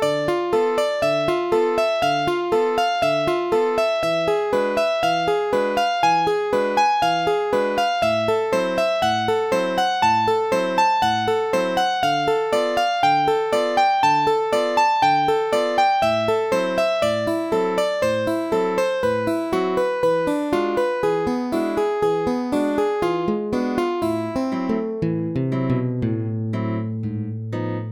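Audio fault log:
No faults heard anywhere in the clip; nothing to log.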